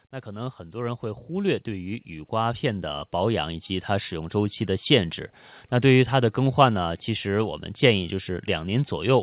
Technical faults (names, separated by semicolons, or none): automatic gain rising